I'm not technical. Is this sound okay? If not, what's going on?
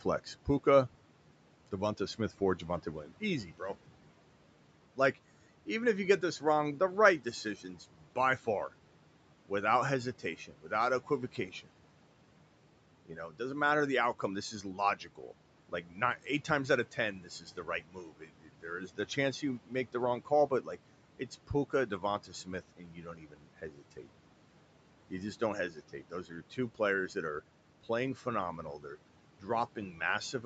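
No. Speech cut by the noise suppressor, from 0.01 to 30.44 s: the call's noise filter mistook about three seconds of quiet speech for background and turned it down, swallowing some sounds.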